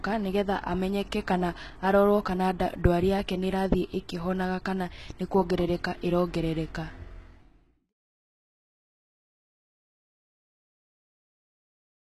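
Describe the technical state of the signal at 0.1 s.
At 0.1 s the speech is most likely passing through HE-AAC compression, and this damage runs through the whole clip. The encoder appears to spend its few bits on the lower spectrum and synthesise the treble by spectral band replication, copying lower bands upward under a coarse envelope. That fits a very low bitrate, around 16 kbps. The treble sounds bright but inexact, with plainly audible gritty, lispy sibilance, and nothing above 12.3 kHz.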